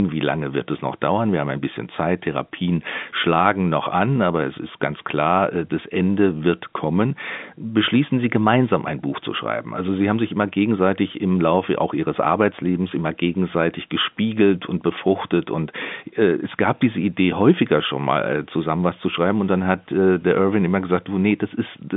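Speech carried over G.711 A-law telephone coding at 64 kbps, its line band running from 150 Hz to 3.6 kHz with nothing above 3.7 kHz, and no faults to report.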